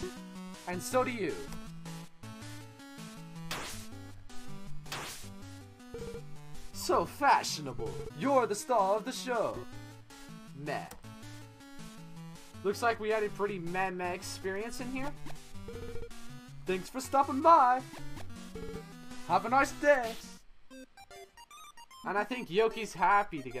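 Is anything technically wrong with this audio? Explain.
No, the signal holds steady throughout, with consistent level and continuity and no audible technical faults.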